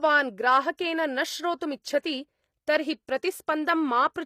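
From the start, the speech carries the marks of HE-AAC compression. This is likely the cause. The treble sounds false. Only the lower band is coded properly. The upper band is copied up from below and shaped roughly. Its harmonics do not match the real ones. S sounds turn gritty and lispy. The damage is plainly audible, which fits a low bitrate around 24 kbps. Nothing reaches above 14.9 kHz.

Pre-echo appears three times. The first runs from 0.77 to 0.79 s, spreading over 23 ms. The next is at 2.02 s, spreading 19 ms. The last is at 3.07 s, spreading 11 ms. Each time a sharp attack sits late in a coding block. Noise meant for the loud part fills the quiet gap before it. A short hiss leads into each attack, which sounds soft and smeared.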